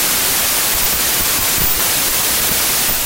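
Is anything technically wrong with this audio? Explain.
Yes. Throughout, the speech sits buried under loud, harsh noise, running fast and high-pitched at about 1.33 times normal speed. This is wrong sample width, which fits packed 24-bit data read as 32-bit: samples straddle mismatched bytes, and four-byte reads shrink the sample count.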